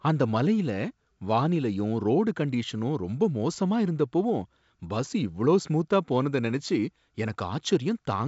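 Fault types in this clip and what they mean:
Nothing goes wrong here: the speech comes through G.722 wideband telephone coding at 64 kbit/s, and whatever that coding leaves behind is faint at most.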